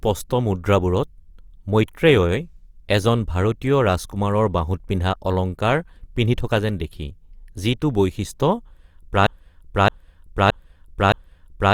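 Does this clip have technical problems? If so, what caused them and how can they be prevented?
Yes. From 9.27 s to the end, a broken-record loop repeats one 0.62 s fragment four times, likely because a stalled player or stream kept resending its last buffer. The waveform shows identical blocks tiling every 0.62 s. A stall watchdog that mutes instead of repeating would prevent it.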